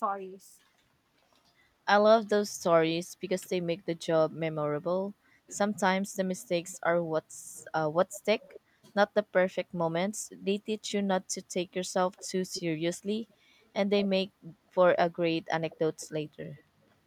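A delayed copy of the speech appears five times. This is echo leak, likely from a far-end loudspeaker whose echo canceller let some of its microphone pickup return. The first scrap is very quiet, at 6.67 to 6.78 s, then 7.57 to 8.6 s, both trailing by about 230 ms. At 12.16 to 12.6 s and 13.29 to 14.05 s the echo lags by 215 ms and grows louder. A softer one follows at 15.7 to 16.63 s.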